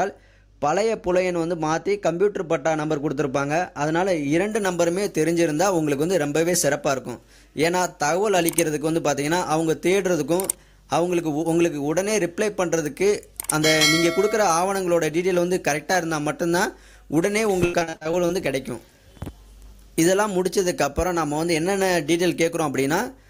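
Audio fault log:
4.51–23.30 s: pre-emphasis left on. Treble sits about 10 dB high at 10 kHz relative to 1 kHz, consistent with an uncorrected 50 µs FM curve, giving thin, bright, sibilant sound.
17.65–18.31 s: repeated packet loss (robotic sound). Eight short dropouts, longest 78 ms, patched by extending prior sound, concealing about 42% of the stretch, so it turns choppy.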